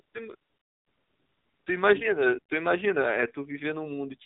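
The whole clip has gone through the AMR narrowband mobile codec. Everything above 4 kHz is gone, so the speech sounds thin and boxed-in, and the low bit budget leaves it plainly buzzy and synthetic, which fits a rate around 7.4 kbps.

AMR comfort noise then shows up twice. From 0.02 to 0.14 s, and again from 0.36 to 1.66 s, the phone decided nobody was talking and stopped sending speech frames. The receiver filled those 120 ms and 1.3 s gaps with smooth, steady generated hiss that switches in and out abruptly.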